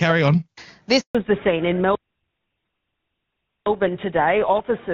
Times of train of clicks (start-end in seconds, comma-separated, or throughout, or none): none